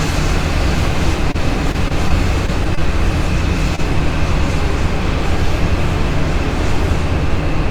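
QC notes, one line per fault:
1.31 s: short stall from a late packet. A packet arrived late, so the last sound was stretched about 28 ms before playback resumed, nothing lost.
1.72–2.79 s: repeated packet loss (robotic sound). Six gaps in quick succession were patched by repeating sound, leaving a choppy stretch with about 80 ms missing.
3.75 s: short stall from a late packet. The buffer ran dry and the sound was held about 25 ms too long, giving a brief drawn-out dip.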